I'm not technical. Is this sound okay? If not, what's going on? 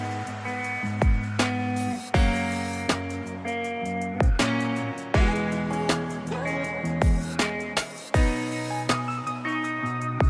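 Yes, nothing wrong here.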